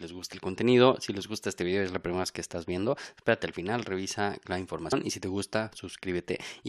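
At 4.91 s the audio jumps ahead about a tenth of a second. Compressed frames were skipped, fitting roughly four 23.2 ms frames.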